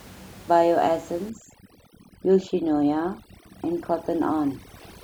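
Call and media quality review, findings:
Overdone noise removal from 1.30 s to end: background drops, with twinkling specks. Suppressor set too aggressive, gating bands near its noise estimate. Room noise about 23 dB below speech.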